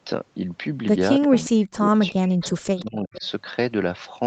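An echo canceller likely failed to remove loudspeaker pickup, so an echo leak returns a faint copy of the speech 359 ms late, about 20 dB down, at 1.22 to 1.4 s. From 1.26 to 2.42 s, speech is suppressed in double talk, likely because the canceller mistook the talker for echo, and the voice dips by up to about 40 dB. Further echo scraps, about 25 dB down, follow at 2.06 to 2.13 s and 2.42 to 2.52 s. The speech is suppressed again from 2.59 to 3.24 s, and a last echo at about 20 dB down comes at 3.15 to 3.27 s.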